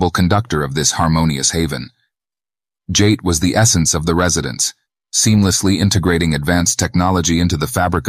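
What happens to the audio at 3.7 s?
At 3.7 s the speech carries on intact, with no dropout, click, distortion or other fault.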